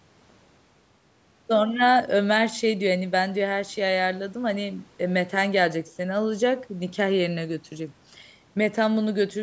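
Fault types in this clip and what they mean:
No faults can be heard anywhere in this speech.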